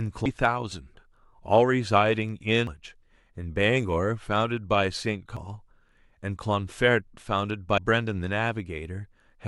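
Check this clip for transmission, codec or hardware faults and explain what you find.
The speech shows damaged data in a compressed stream at 0.26, 2.67, 5.37 and 7.78 s. At each point corrupted bytes make the decoder misread its frames and lose sync until it finds the next frame header. Each one sounds like a short chirp or blip.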